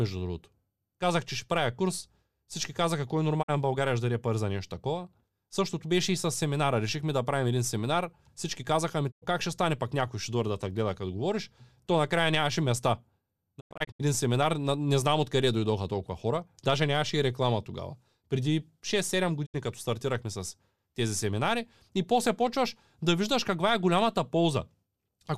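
Digital broadcast dropouts mute the speech at 3.41–3.50 s, 9.10–9.24 s, 13.59–14.01 s and 19.45–19.56 s. Lost frames silence the receiver, fading out over 20 ms. At 13.59 s, several short holes scatter, the longest 96 ms.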